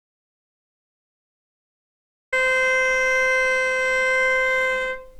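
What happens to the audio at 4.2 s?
Nothing goes wrong at 4.2 s; the audio plays through that moment intact, with no dropout, click or other fault.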